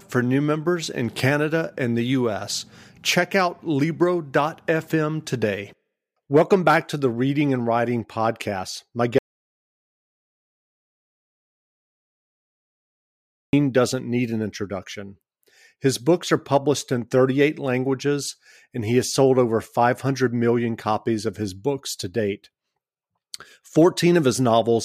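At 9.18 s the input feeding the recorder was likely lost, most plausibly through a disconnected device, a dropped link or an accidental mute, while the encoder kept writing silence. The result is an audio dropout to silence: the speech stops mid-flow and the next 4.35 s, up to 13.53 s, is dead silence with no room tone underneath. Whatever was said in that stretch is gone, and the speech resumes abruptly.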